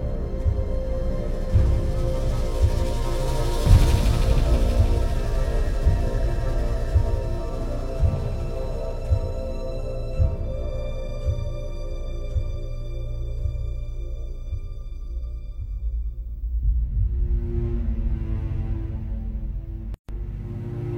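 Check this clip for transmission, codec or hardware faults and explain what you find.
One codec-related fault is present. A gap at a join of encoded pieces opens from 19.94 to 20.09 s, about 144 ms long. Separately encoded segments were butted together untrimmed, so the encoder's start delay and last-frame padding remain. Sound drops out abruptly, with smeared edges, then resumes where it stopped.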